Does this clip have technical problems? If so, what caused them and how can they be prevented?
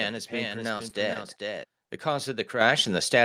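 Yes. A second capture path or misaligned edit likely mixed in a doubled audio track, already present at the start and ending abruptly at 1.64 s. A dry copy trails about 0.4 s behind at about 5 dB quieter. To prevent it, route only one capture path into the mix and check edits for overlapping copies.

Short concealed packet loss hit at 0.77 to 0.81 s, 0.89 to 0.93 s, 1.13 to 1.17 s, 1.85 to 1.91 s and 2.83 to 2.87 s. The decoder bridged 20 ms gaps, and a 40 ms gap at 1.85 s, by extending the preceding sound, which leaves brief smears or wobbles. To prevent it, use a stable, less congested network connection and a larger jitter buffer.

The microphone volume stepped up at 2.61 s when the call software raised the input gain by 7 dB in one jump, so voice and background get louder together. To prevent it, disable automatic microphone gain adjustment and set a fixed input level beforehand.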